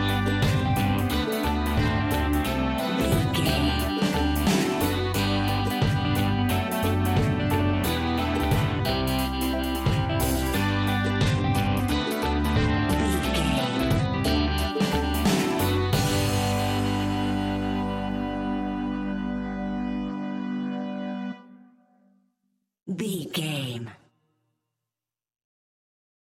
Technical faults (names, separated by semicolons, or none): Bluetooth SBC bit pool drop